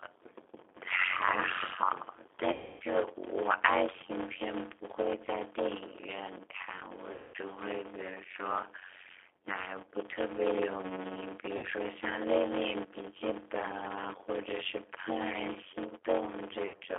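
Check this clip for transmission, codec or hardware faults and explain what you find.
Yes, there are three faults: a block size mismatch with zero padding and G.729 codec damage run through the whole clip, and VoIP packet loss concealed by the speech codec occurs four times.

Block size mismatch (padded), throughout: each block is written shorter than the next stage reads, and the remainder is zero-filled. Speech plays at about 0.53 times normal speed with a steady buzz near 92 Hz, which fits 256-sample blocks read into a larger frame. The waveform shows regular flat gaps, and the spectrogram shows vertical stripes and harmonics of 92 Hz.

G.729 codec, throughout: speech is rebuilt from a filter, a pitch predictor and sparse pulses at a rate that fits 8 kbit/s. The sound is rough and synthetic, with plainly audible damage. On a spectrogram, energy sits only between 300 Hz and 3.6 kHz, with smeared, grainy harmonics.

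VoIP packet loss concealed by the speech codec, at 2.52–2.84 s, 7.12–7.37 s, 11.57–11.65 s and 16.68–16.80 s: when audio stopped arriving, the decoder kept extending its last pitch and filter at falling gain. This covered about 280, 220, 60 and 80 ms, and the last loss was scattered across 100 ms. Each gap becomes a fading buzzy tone or coloured noise, seen as flat, decaying bands that stay weak briefly after speech resumes.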